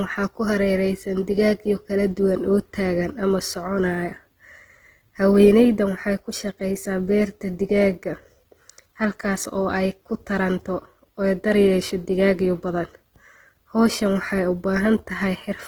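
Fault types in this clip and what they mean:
Opus compression: a likely low-bitrate Opus encode in music mode, fitting about 16 kbps, fills starved bands with noise, so the speech sounds plainly grainy and rough.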